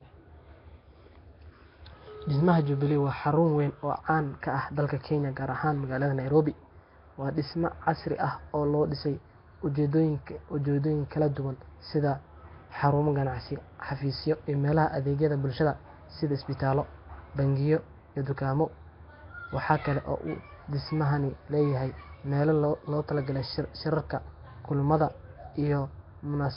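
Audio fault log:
throughout Nellymoser compression: heavy rough hiss and underwater smear, nothing above 5.3 kHz; likely Nellymoser Asao near 22 kbps, noise-filling starved bands rather than MP3's metallic warble.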